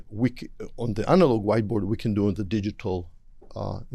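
Nothing goes wrong anywhere in the clip; there are no technical faults to point to.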